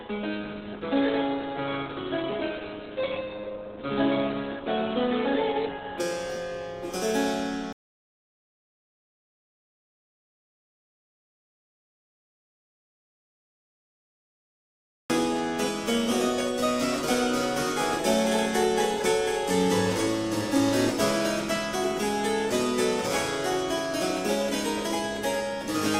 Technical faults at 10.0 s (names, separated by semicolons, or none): audio dropout to silence